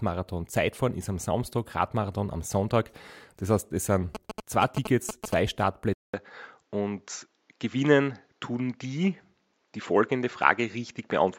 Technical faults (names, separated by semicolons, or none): GSM signalling bursts; input switched to a poorer device